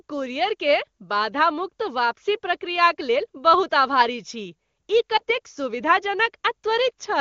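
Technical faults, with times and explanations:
5.17–5.22 s, lost AMR speech frame: after "छी ई", one 20 ms frame drops. The decoder reuses the last good settings at lower gain. A brief dip results.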